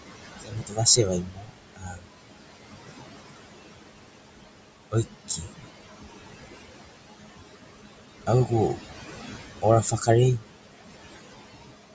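Noise suppressor artifacts run through the whole clip. The suppressor pulls the steady room noise, which sits about 10 dB under the speech, down by about 20 dB frame by frame. The background sinks between phrases and rises back beneath them, giving a pumping texture.

Speech cut by the noise suppressor occurs at 0.4–0.8 s, 0.96–1.55 s, 1.75–2.09 s, 5.28–5.54 s and 9.91–10.08 s. There the suppressor mistook parts of the speech for noise and lowered them by about 18, 22, 21, 18 and 10 dB, so those stretches sound swallowed or faint.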